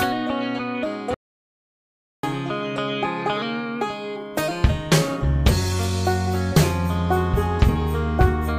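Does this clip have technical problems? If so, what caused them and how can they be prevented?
Yes. The music has an audio dropout to silence from 1.14 s to 2.23 s, about 1.09 s in which the signal is simply gone. Unlike a quiet passage or a noise gate closing, the gap holds no room tone or noise floor at all, and the music stops and resumes abruptly. That points to silence being written while the input was absent, likely from a momentary disconnection or an accidental mute upstream of the recorder. Secure cables and interfaces, lock mute controls during takes, and monitor input meters while recording.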